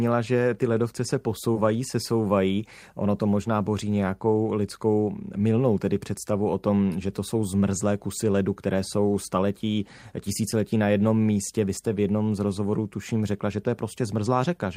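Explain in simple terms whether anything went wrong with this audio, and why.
Right after "že ty ledovce se", from about 1.53 to 1.57 s, the speech briefly smears for a few hundredths of a second before "se souvají". That's short concealed packet loss: about 20 ms of the call arrived too late, so the receiver stretched the preceding sound to cover the gap.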